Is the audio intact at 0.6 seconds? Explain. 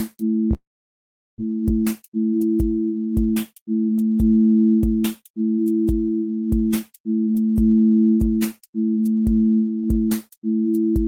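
No. At 0.6 seconds the clip is inside a long network dropout that runs from about 0.53 to 1.40 s. The last sound is stretched into a fading buzz, and then silence takes over for about 0.75 s. When the audio returns, roughly 0.6 s of material is simply gone, and the timing has shifted by about a third of a second. The likely cause is a stall in packet delivery that left the receiver with nothing to play.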